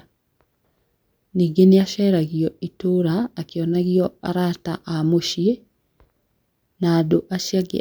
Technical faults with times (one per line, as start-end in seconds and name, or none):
none